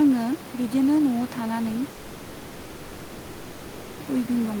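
At 1.92 s the speech breaks off. The last sound is stretched into a buzzy hiss that fades. A low, steady noise then fills the gap until 4.02 s, with no dead silence. Speech resumes there, but about 2.1 s of it is simply gone. This is likely a long network dropout: no audio arrived, and the receiver padded the gap instead. The room noise sits about 16 dB below the speech.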